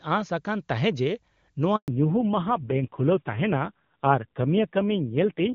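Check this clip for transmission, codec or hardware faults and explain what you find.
Two faults are present, both at the same moment: a handover gap followed by a fallback to narrowband, which together suggest the call changed networks.

The handover gap runs from 1.76 s to 1.88 s, 120 ms of dead air. While the call was passed from one network to another, no speech frames reached the receiver, so the speech decays within a few tens of milliseconds and then stops entirely. On the waveform this shows as an abrupt flatline. On a spectrogram it is a clean vertical strip empty at every frequency. Anything spoken in that window is gone.

The fallback to narrowband starts at 1.88 s, as the new link resumes, and continues to the end. Before the gap the speech has the full HD Voice band, with the AMR wideband codec running cleanly and little or no coding damage, at a quality consistent with its top rate near 24 kbit/s. 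After the switch the call runs on a narrowband codec, and nothing above 4 kHz survives. Sibilants lose their crispness and the speech turns muffled and dull. The raspy, coarse texture points to a low narrowband rate, roughly 6 kbit/s. On a spectrogram the energy above 4 kHz, visible before the gap, is cut off by a hard horizontal ceiling from 1.88 s onward.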